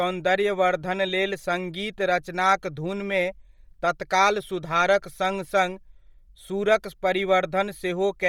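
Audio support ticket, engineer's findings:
Speech breathy and grainy throughout, with a hissy top end; bandwidth reaches about 20.2 kHz, but the highs are noise-filled rather than detailed. Likely Bluetooth LC3 compression: a starved bitrate, consistent with 32 kbps and 10 ms frames, zeroes upper-band content and substitutes noise.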